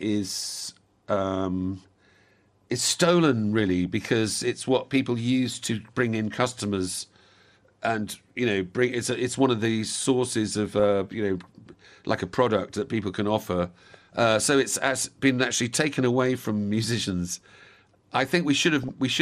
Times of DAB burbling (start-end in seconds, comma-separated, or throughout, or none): 3.60-3.86, 10.80-10.84, 18.83-18.89